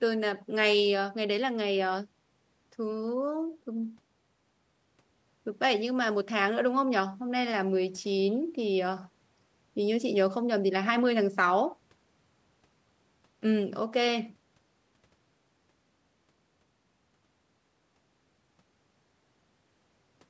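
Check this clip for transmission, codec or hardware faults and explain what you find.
I find no transmission, codec or hardware faults in this speech clip, which has only passed through normal call microphone processing.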